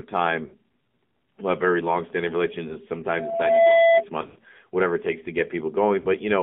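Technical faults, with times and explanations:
throughout: AMR narrowband mobile codec. The speech is boxy and buzzy, with a synthetic, processed edge, and nothing sits outside roughly 150 Hz to 3.6 kHz. A 7.4 kbps AMR-NB speech coder does this. It rebuilds the voice from a vocal-tract model excited by a few pulses per subframe, so at this modest bitrate fine detail is lost and the artificial quality is plainly audible. The narrow band fits a telephone line.
0.46–0.54, 2.68–2.76, 4.22–4.38, 6.00–6.06: lost AMR speech frames. The sound briefly smears, warbles and sags. The 2.68 s event is a single short dip of about 20 ms. At 0.46 s about 60 ms goes missing and at 6.00 s about 40 ms. The worst patch, just before "whatever it takes to", is scattered over 160 ms with a 120 ms run, long enough to stretch the sound and fade it toward silence. The decoder filled corrupted frames by repeating the last good settings at falling gain.
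3.14–4.04: loudspeaker feedback squeal. A steady 670 Hz tone swells over roughly half a second into a squeal standing around 10 dB above the speech, then ends at 4.04 s. The microphone was picking up its own loudspeaker. At 670 Hz the loop gain passed unity, so that one frequency fed on itself and kept growing until the amplifier limited it or the loop was broken.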